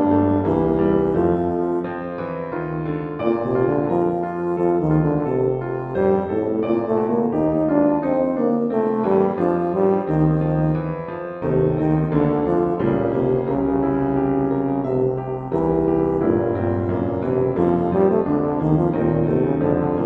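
Throughout the clip, the audio has been split into windowed frames and rejoined with an overlap whose window gains don't add up to a constant, producing overlap-add ripple. Each frame boundary leaves a dip or bump in level, so the gain swings by about 6 dB at the frame rate, somewhere around 100 Hz. The result is a metallic buzz over the whole sound, with extra tones around each note, that never lets up.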